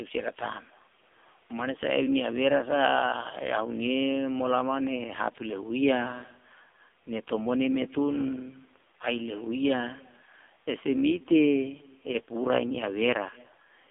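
From start to finish the speech runs through the AMR narrowband mobile codec, heavily damaged. Its vocal-tract model, driven by sparse pulses, makes the voice buzzy and synthetic, which fits a low bitrate near 6 kbps. A spectrogram shows energy confined between 250 Hz and 3.6 kHz, with nothing above.

Throughout, an echo with no canceller is also present. The far end's loudspeaker feeds its microphone, and the voice returns roughly 300 ms later, about 27 dB down, as a faint, thin shadow. The waveform shows small delayed copies trailing each burst of speech.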